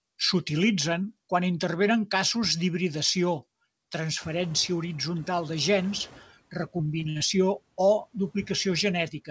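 Around 4 s the room noise jumps by about 19 dB. From 4.2 to 6.24 s the noise suppressor is catching up: its noise estimate lags, so the noise first passes with less reduction, then sinks by about 9 dB over 2 s. Unlike a gate, the reduction eases in gradually.

From 6.78 to 7.22 s, repeated packet loss makes the sound robotic. Five short holes, the longest 58 ms, are each patched by extending the previous sound, covering about a quarter of that stretch. Unlike one dropout, the choppy, robotic texture recurs in quick succession.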